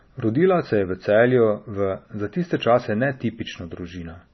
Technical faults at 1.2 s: MP3 compression

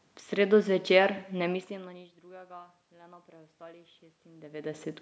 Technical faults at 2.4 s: none

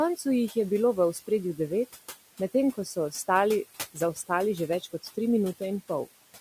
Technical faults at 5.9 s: noise suppressor artifacts

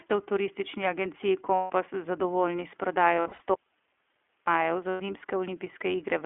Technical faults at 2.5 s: iLBC codec

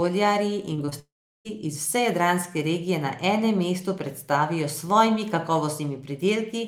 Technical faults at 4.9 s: none

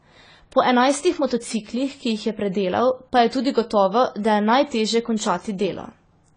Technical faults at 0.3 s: AAC compression

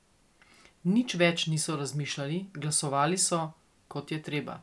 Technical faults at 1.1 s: none

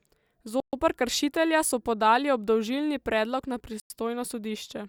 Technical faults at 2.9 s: none

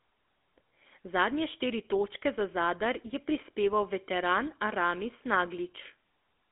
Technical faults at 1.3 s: GSM full-rate codec

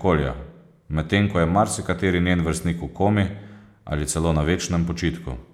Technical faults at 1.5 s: none

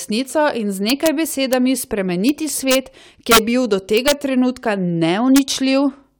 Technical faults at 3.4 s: integer overflow

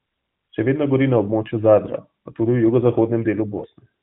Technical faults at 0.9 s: none

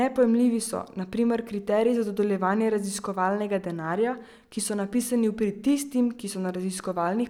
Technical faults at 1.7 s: none

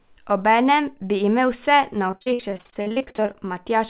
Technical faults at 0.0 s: none

